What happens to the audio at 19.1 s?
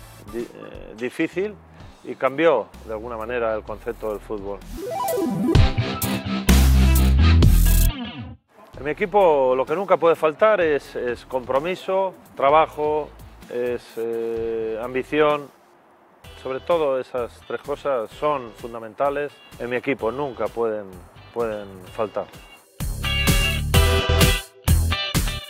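Nothing goes wrong at 19.1 s; the audio plays through that moment intact, with no audible fault.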